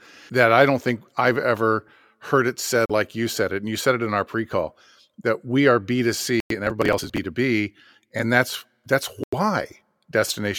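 Three times the speech cuts to silence and resumes: 2.86 to 2.91 s (about 38 ms silent), 6.40 to 6.51 s (about 101 ms) and 9.24 to 9.35 s (about 90 ms). These are likely Bluetooth stalls, where delayed packets let the headphone buffer run dry and playback paused until resent data arrived.

From 6.67 to 7.18 s, shortly after the second dropout, the processor falls behind on its tiny audio buffers, missing around thirty deadlines over the stretch with blocks that fit roughly 10 ms each. Each missed block is skipped, leaving hard-edged gaps that together form a gritty processor overload crackle over the speech.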